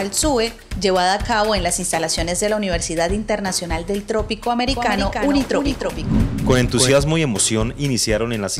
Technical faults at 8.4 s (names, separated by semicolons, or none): none